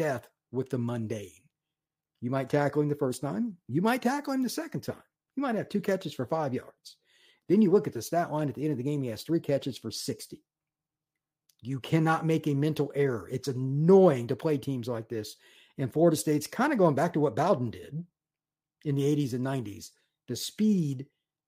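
No technical faults can be heard anywhere in this speech recording. Nothing in the audio calls for a timestamp or an explanation.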